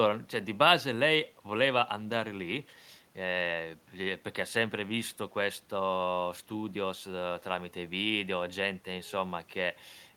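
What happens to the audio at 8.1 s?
Nothing goes wrong at 8.1 s: the speech carries on intact through that moment, with no dropout, click or other fault.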